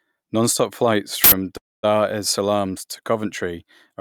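At 1.24 s the playback system sent out a block of memory before any audio had been written into it, so leftover data was played as samples. This uninitialised buffer is heard as a harsh, loud burst of digital noise lasting about 80 ms, ending at 1.32 s, with nothing of the speech in it.

From 1.57 s to 1.85 s the incoming speech stalls, most likely because packets were held up in transit and the call's jitter buffer ran dry. This call audio freeze begins with the last sound briefly carried on, then about 230 ms of silence. When the speech returns it picks up exactly where it stopped, so nothing is lost, but everything after that point arrives about 0.26 s late.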